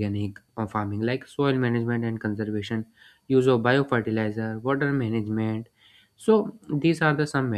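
No technical faults can be heard anywhere in the speech recording, and the signal stays continuous and stable throughout.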